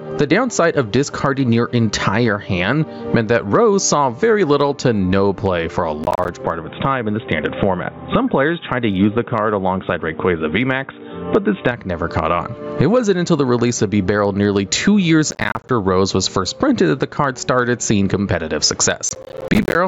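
The audio is held at a level that swells and sinks throughout. This is gain pumping. The gain swings by roughly 15 dB. The likely cause is an input gain set far too high, with a fast limiter or compressor reining it in on every peak. Loud and soft parts sit unnaturally close together, and the result sounds squashed. Processor overload crackle appears three times: from 6.04 to 6.29 s, from 15.31 to 15.69 s, and from 19.09 to 19.75 s. Each burst is a rapid string of tiny silent gaps with hard edges, heard as gritty tearing over the sound. The spacing fits missed audio buffers of about 10 ms each. The processor could not finish them in time, and the last burst is the longest. From 6.44 to 11.71 s the input switched to a poorer device. The sound turns dull, with nothing above 3.8 kHz. The level shifts by about 5 dB, and a new noise floor about 55 dB down comes in. There is no silence at the changeover. 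The likely cause is the system moving to another microphone or a headset's call profile and then back. Outside that stretch the call's microphone processing passes sound up to 8 kHz.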